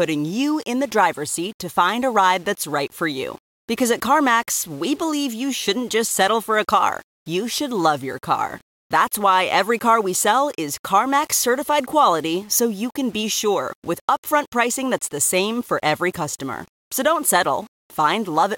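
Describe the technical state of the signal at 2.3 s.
At 2.3 s the speech carries grainy distortion throughout, likely low bit depth without dither, fitting about 7 bits, with error about 30 dB down that tracks the signal rather than steady hiss.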